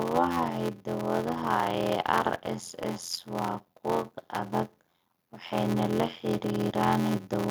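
From start to finish, the speech carries a steady buzz at 86.1 Hz, the signature of a block size mismatch (padded). One stage is handing over shorter blocks than the next one reads, and the leftover space is filled with silence, so every block gets a little hole. The buzz rate fits 512-sample reads, and the playback runs at 0.625 times normal speed while keeping roughly its normal pitch, which points to blocks of about 320 samples being written into them.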